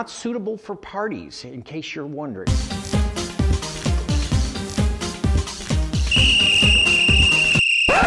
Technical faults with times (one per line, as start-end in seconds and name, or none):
none